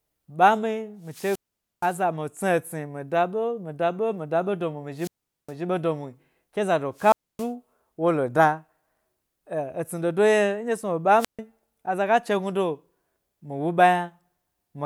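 The radio link from an analogue FM microphone fades four times, and each time the receiver's squelch shuts the output: wireless microphone squelch dropouts at 1.03–2.02 s, 4.97–5.53 s, 6.95–7.51 s and 11.17–11.39 s. A short swell of hiss or static comes first. The speech then falls into a near-silent hole of about 470, 413, 270 and 142 ms respectively before the signal recovers and the speech comes back.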